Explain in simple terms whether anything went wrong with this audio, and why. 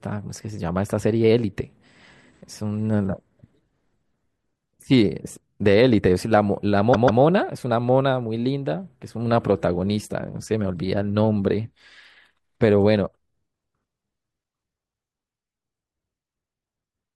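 At 6.93 s the speech stutters: a chunk of about 144 ms plays twice more, a fault called repeated frames. Unlike a dropout, nothing goes missing. The same sound comes back, making the clip about 0.29 s longer.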